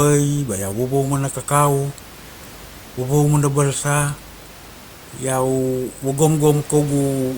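It's a speech recording with nothing technically wrong to flag, just a bit of background room noise sitting about 26 dB below the speech as part of the recording itself.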